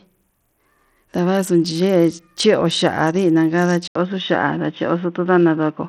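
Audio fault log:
throughout: Bluetooth SBC compression, likely at a low bit pool. Treble flickers and grit rides on the speech, showing as patchy, blocky upper bands on a spectrogram.
3.88–5.88 s: input switched to a poorer device, the likely cause. An 80 ms waveform gap, then boxy speech at similar level, nothing above 3.8 kHz, faint new noise.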